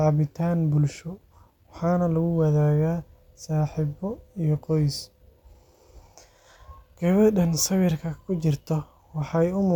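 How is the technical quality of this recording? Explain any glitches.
No technical glitches can be heard anywhere in the recording; the speech signal stays continuous and intact throughout.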